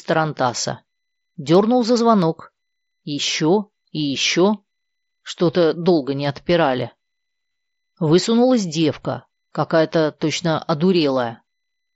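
Right after "долго не отпирали", from 7.50 to 7.58 s, there's concealed Bluetooth headset packet loss: 52.5 ms went missing across 75 ms, the longest gap 37.5 ms. The receiver filled it by repeating recent waveform, giving a brief buzzy held tone and a slight warble as real audio returns.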